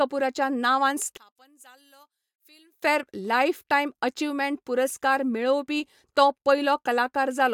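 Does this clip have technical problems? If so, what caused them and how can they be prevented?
Yes. From 1.17 to 2.82 s, just before "लायफटायम अचिव्हमेंट पुरस्कार", the speech drops by about 30 dB to a faint trace. This likely comes from one channel inverted. The two channels cancel when summed to mono. Keep polarity consistent across both channels, and check mono compatibility before export.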